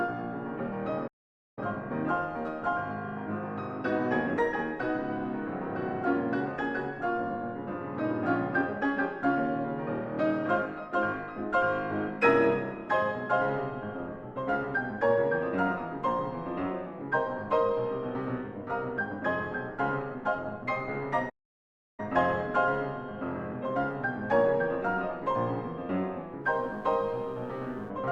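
The player likely ran short of buffered data, or its output thread was briefly blocked, causing two playback stalls. The audio drops to silence mid-flow from 1.07 to 1.59 s, about half a second, and again from 21.29 to 22.0 s, about 0.7 s, before resuming. Near the end, switching spikes from 60 Hz mains get into the signal path, as a dimmer, rectifier or unshielded cable would allow. Their harmonics stretch up to several kHz, producing a steady, raspy mains buzz from 26.42 to 27.92 s, sitting faintly, roughly 40 dB below the audio.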